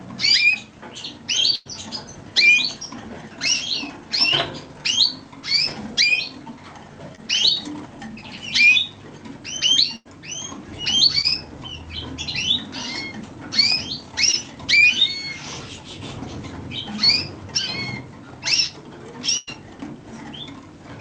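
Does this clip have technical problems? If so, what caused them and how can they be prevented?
Yes. There are three bursts of packet loss, at 1.55 to 1.67 s, 9.96 to 10.07 s and 19.37 to 19.49 s. In each, about 100 ms of audio never arrived in time. The receiver covered the hole by extending the last sound and fading it down over roughly 0.1 s. That leaves a held buzz or a dying hiss. The sound then picks up further along, with that stretch gone. A larger jitter buffer or forward error correction in the codec would help prevent these losses.

There is also short concealed packet loss at 7.15 to 7.20 s, 11.21 to 11.26 s and 14.32 to 14.35 s. Each time about 20 ms went missing. The decoder patched the gap by continuing the preceding sound, as pitch or as shaped noise, then blended back into the real signal. The result is a brief smear or wobble, and a very short sound can drop out. A steadier network path with less jitter, or redundant packet coding, would prevent these small gaps.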